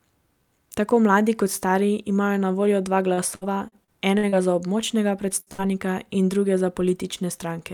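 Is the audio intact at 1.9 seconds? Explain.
Yes, the speech at 1.9 seconds plays through cleanly, with no dropout, click, distortion or other fault at that moment.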